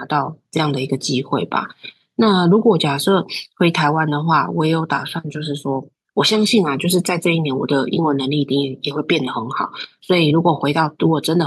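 No technical faults can be heard anywhere in this recording.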